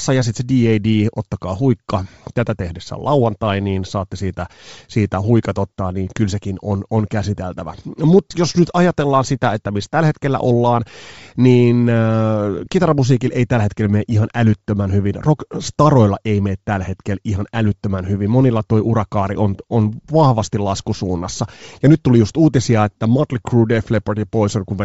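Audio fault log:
throughout: Bluetooth LC3 compression, likely cause of the plainly audible grainy, breathy edge, where upper spectrum is dropped and noise-filled, which fits roughly 32 kbps with 7.5 ms frames.
12.66 s: lost LE Audio frames, a brief smeared noisy blip just before "kitaramusiikilla ei tällä hetkellä", where the decoder repeated the previous spectrum with randomised signs across a 7.5 ms gap, consistent with one lost frame.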